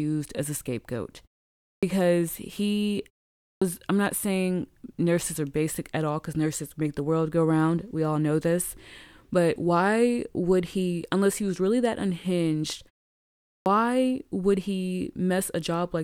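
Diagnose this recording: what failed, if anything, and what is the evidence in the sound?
The playback stage shows a clipped start after a pause. At 1.74 s, after "as a scapegoat", at 3.53 s, before "I'm not saying nurses", and at 13.57 s, speech resumes abruptly, missing about 86 to 89 ms. The output device sleeps during the 0.5 to 0.75 s silences and wakes too late.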